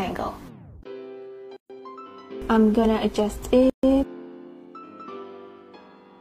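Two gaps at joins of encoded pieces break this audio, at 1.57 to 1.70 s (132 ms) and 3.70 to 3.83 s (136 ms), spaced about 2.0 s apart. Separately encoded segments were joined untrimmed, so encoder start delay and last-frame padding leave short silences with smeared edges before the sound resumes where it stopped.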